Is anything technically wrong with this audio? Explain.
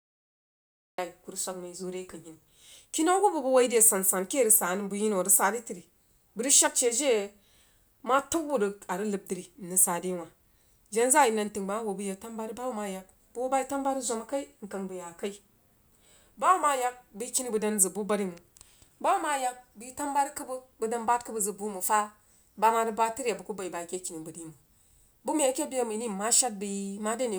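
Yes. There is a cut-off start: the first 0.98 s is digital silence, and the speech then enters abruptly mid-sound because capture began late. Unlike a slow fade-in or a dropout, there's no ramp and no earlier audio, just a hard onset at 0.98 s.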